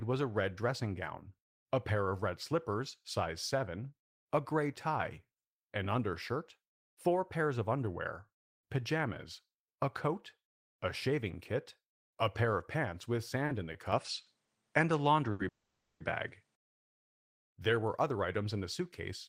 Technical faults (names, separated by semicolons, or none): short stall from a late packet; input switched to a poorer device; call audio freeze; jitter buffer speed-up